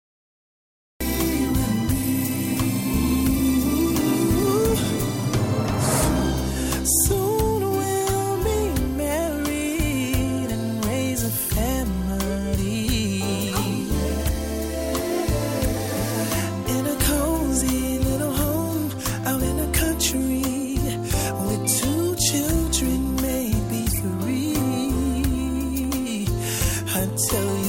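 The first second, from 0.0 to about 1.0 s, is digital silence, and at 1.0 s the sound enters abruptly, already in progress. This is a cut-off start: capture or the stream began late, so the opening of the sound was never recorded and the track jumps straight into its middle with no attack or rise. Unlike a slow fade-in, there is no gradual build. Unlike a dropout, the gap sits only at the very start and nothing before it is heard.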